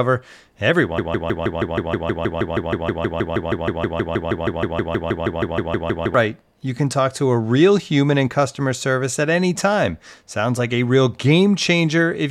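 The player or stream likely stalled at 0.98 s and kept resending the last fragment it held, a broken-record loop. A piece of speech about 0.16 s long repeats exactly, back to back, 33 times until 6.14 s, and the speech that belonged in that span is lost.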